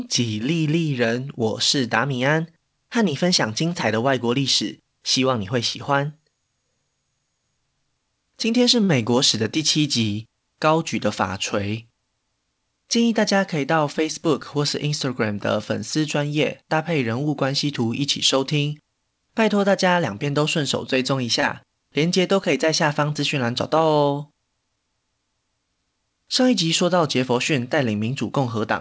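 It's a speech recording that came through a call path, with nothing above 8 kHz, consistent with a G.722 wideband codec. At 8.84 to 8.91 s and again at 21.41 to 21.45 s there's a short stall from a late packet: the jitter buffer ran dry, so the receiver held the last sound for about 46 ms and then 21 ms before carrying on. Between 12.77 and 13.40 s you get a jitter buffer speed-up, where a backlog was trimmed by cutting out tiny pitch-period slices, roughly 50 ms in all, so things run about 6% fast at unchanged pitch.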